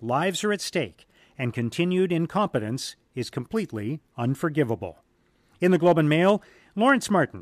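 No technical faults can be heard at any point in the recording.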